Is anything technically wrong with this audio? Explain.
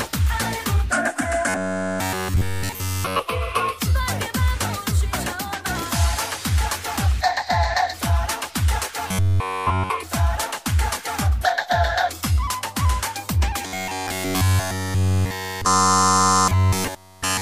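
Yes. Robotic sound from repeated short buffers occurs at 1.49 to 3.19 s, 9.08 to 9.90 s, and from 13.67 s to the end. Playback likely starved and looped a roughly 10.7 ms buffer in place of nearly all the real audio, imposing a rigid, metallic 93.8 Hz buzz.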